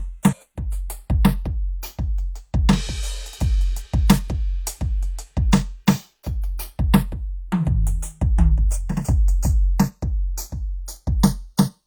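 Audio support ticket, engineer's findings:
Channels drifting apart: slow flanging across the music when summed to mono, throughout. Separate device clocks, around 30 ppm apart. Inter-channel delay creeps to a fraction of a millisecond. Steady sweep, not modulation-effect periodic.

Damaged data in a compressed stream: short glitches at 0.28–0.34 s, 3.81–3.85 s and 9.06–9.12 s. Decoder misreads corrupt frames and resyncs.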